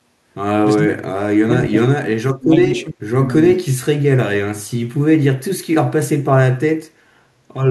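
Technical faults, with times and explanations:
0.83–1.26 s, 1.44–2.13 s, 2.35–3.34 s, 3.57–4.05 s: speech suppressed in double talk. The speech drops in pieces, by roughly 35 to 40 dB, likely because the echo canceller mistook overlapping talk for echo.
2.65–2.85 s: echo leak. A faint copy of the speech returns about 440 ms late, roughly 25 dB down, likely loudspeaker pickup that the echo canceller failed to remove.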